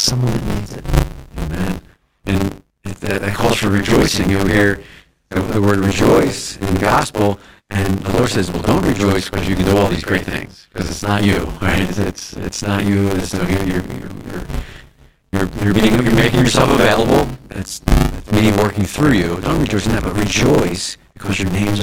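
Buffer tearing runs through the whole speech. The writer and reader of the ring buffer have slipped, so most of each 10 ms period, around two thirds, replays audio from about 40 ms earlier. The hard joins make a robotic 100 Hz buzz.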